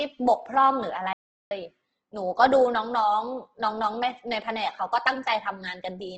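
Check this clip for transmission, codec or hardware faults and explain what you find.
Two faults are audible in this speech: heavy codec damage that runs through the whole clip, and one full cut to silence.

Opus compression is the likely cause of the degradation throughout. Nothing reaches above about 8.2 kHz, so the top octave is gone and the voice has a wideband, band-limited ceiling. Instead of MP3's swirling, watery holes, the tonal parts of the voice turn grainy and rough, with a noisy texture where detail should be. That happens when the encoder runs short of bits and refills bands by copying lower ones or inserting noise. The sound fits the music-oriented CELT mode at a very low rate, roughly 12 kbps.

An audio dropout to silence runs from 1.13 s to 1.51 s, about 0.38 s. The signal stops abruptly and resumes mid-flow, and the gap is silent with no room tone or hiss underneath. That absence is what separates it from a noise gate or a quiet pause, where some background would remain. 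The likely mechanism is lost input, such as a disconnection or a failed link, while recording continued writing silence.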